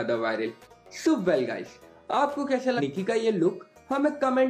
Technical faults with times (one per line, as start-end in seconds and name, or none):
0.63-0.67 compressed frames skipped
2.77-2.81 compressed frames skipped